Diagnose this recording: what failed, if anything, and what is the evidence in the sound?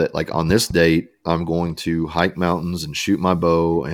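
Loud pop at 0.50 to 0.73 s: two thumps a few dB over the speech between "like on" and "I'm going to hike", likely a voltage step in analogue wiring.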